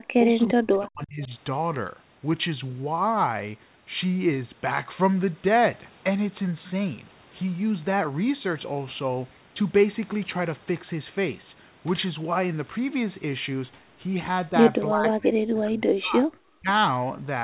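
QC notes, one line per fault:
0.00–1.31 s, 14.91–16.29 s and 16.54–16.69 s, speech suppressed in double talk: the speech dips by about 30 to 40 dB, likely because the echo canceller could not separate the talker from the overlapping loudspeaker echo and turned both down. The 4 kHz call band holds throughout.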